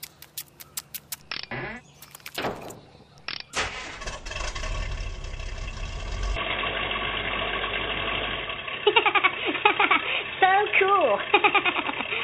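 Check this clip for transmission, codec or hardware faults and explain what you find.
One fault turns up. Input switched to a poorer device, likely, from 6.36 s to the end. Without a gap, the band stops at 3.8 kHz and the level shifts about 5 dB, so the sound turns dull and boxy.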